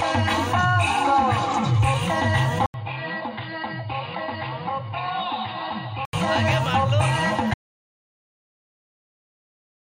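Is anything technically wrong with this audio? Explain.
Yes, there are two faults.

From 2.66 s to 6.13 s the sound turns dull and boxy. Nothing remains above 4.9 kHz, the level falls by about 10 dB, and a new noise floor sits roughly 40 dB down. This is likely an input switched to a poorer device. The 80 ms gap at the switch and the changed noise floor mark a device change rather than a simple filter.

From 7.54 s to the end the sound drops out to silence, likely because the input was lost while the recorder kept writing zeros. There is no room tone at all, which separates this audio dropout from a quiet passage or a fade.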